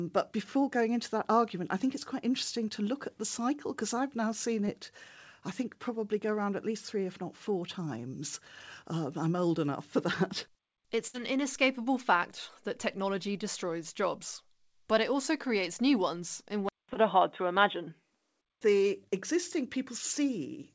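Speech carried over a wideband call link, with the band topping out at 8 kHz as you'd expect from G.722, and it picks up a few network and device faults along the way. There's short concealed packet loss at 4.66 to 4.69 s and again at 16.94 to 16.97 s. Each time about 20 ms of audio never arrived, and the receiver papered over it by extending the previous sound for roughly 15 ms before easing back into real audio. You hear a tiny smear or wobble, and a quick consonant can slip away.

A longer burst of packet loss hits at 11.07 to 11.16 s, with about 60 ms of audio gone. The concealment holds the last sound for around 63 ms and fades it out, so you get a brief held buzz or hiss, and then the speech picks up further along with that stretch simply missing.

From 16.69 to 18.61 s the sound suddenly turns duller and boxier. Nothing comes through above 3.8 kHz, the level shifts by roughly 5 dB, and a new background noise sits far below the speech. 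There's also a 200 ms gap right at the changeover. That's most likely the input switching to a poorer device, say a headset dropping into its narrowband call profile, and the second concealed drop lands inside that stretch.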